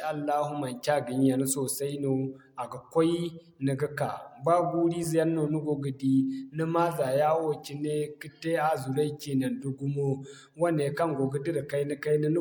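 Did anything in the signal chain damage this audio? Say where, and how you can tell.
No, nothing in the signal chain damaged this audio.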